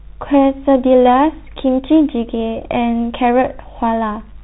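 Speech run through a Bluetooth CVSD headset codec, and the damage is plainly audible across the whole clip. The band stops hard at 4 kHz, so everything sounds boxed-in and phone-like. Because CVSD sends just one up-or-down bit per sample, with a step size that adapts, loud bright moments outrun the step and smear into distortion, s sounds come out scratchy, and there's a grainy hiss sitting under everything, all consistent with a 64 kbps CVSD link.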